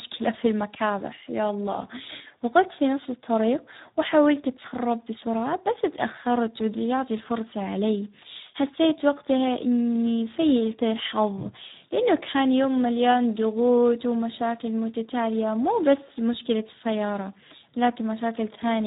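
From start to finish the speech carries heavy Speex codec damage. The voice sounds hoarse and noisy, which fits a low Speex setting around 8 kbps, where too few bits are left to code the excitation and the CELP model falls back on a coarse, buzzy approximation. On a spectrogram nothing appears above 3.8 kHz, a hard ceiling across the whole clip, and the harmonics below it look smeared and grainy rather than cleanly striped.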